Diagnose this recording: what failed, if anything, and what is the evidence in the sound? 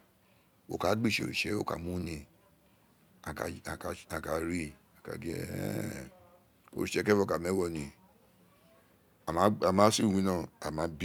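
Nothing in this speech recording points to a failure at any stage of the chain. There is no audible evidence that any stage from capture to playback went wrong.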